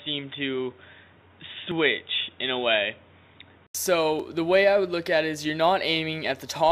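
From the start up to 3.75 s the audio has nothing above 3.8 kHz, so it sounds dull and boxy, with its own background noise sitting roughly 35 dB under the signal. That points to the input likely having switched to a poorer device. At 3.75 s there's an 80 ms silence, then the full band comes back with the level about the same.

At 1.72 s and again at 4.20 s, roughly 20 ms of audio is missing between chunks, with the two sides butted straight together, so each lands as a short skip. The spacing fits a recorder working in 2.5-second chunks.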